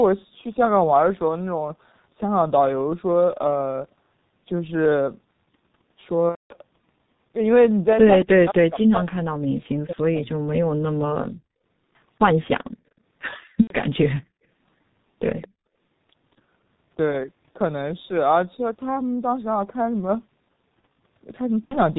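Throughout the clip the speech carries heavy G.723.1 codec damage, at a quality that points to its 6.3 kbit/s mode. The codec works in 30 ms frames and rebuilds the voice from a slowly updated model, so the speech sounds muffled and hoarse and consonants smear together. On a spectrogram, energy stops at 4 kHz, with an empty band above it, and harmonics look coarse and blocky from frame to frame.

From 6.30 to 6.54 s a stretch of about 210 ms drops out, which fits seven consecutive lost 30 ms frames. This is VoIP packet loss concealed by the speech codec. The decoder extends its last pitch and filter at falling gain for the first two lost frames and then mutes, so the voice turns into a short buzzy, fading tone followed by silence, and stays weak briefly after real audio resumes. The waveform shows a short decaying, repetitive envelope before going quiet, and the spectrogram shows flat, unchanging harmonic stripes that then stop.

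Between 8.22 and 11.04 s the speech repeatedly dips and breaks into fragments, for about two seconds in total, with the deepest drops around 40 dB. This is speech suppressed in double talk, likely an echo canceller turning down the near talker while the far side spoke. The waveform shows sudden notches and near-silent holes, and the spectrogram shows columns that thin out or lose their upper bands.

Shorter concealed losses follow at 13.61–13.73 s (about 90 ms, fitting three frames) and at 21.66–21.76 s (about 60 ms, fitting two). Each gives a brief buzzy smear with the same flattened stripes.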